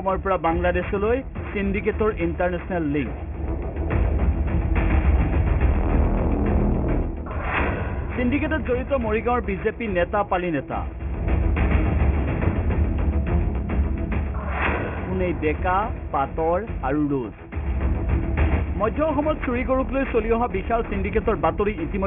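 Aliasing runs through the whole clip. The audio appears to have been resampled down without an anti-aliasing filter, and the spectrum stops abruptly at 3 kHz, which points to a new rate of around 6 kHz. Content that lay above 3 kHz has folded back below it as false, unrelated tones roughly 20 dB under the main signal. High-frequency detail comes out gritty and metallic rather than simply dull, with energy packed hard against the 3 kHz edge.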